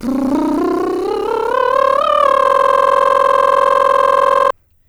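From 2.46 s to 4.51 s the music freezes into a system hang loop. A 46.4 ms slice, which fits a 2048-sample buffer, repeats exactly 44 times at 21.5 Hz as the hardware cycles a stalled buffer, giving a rapid stutter and losing about two seconds.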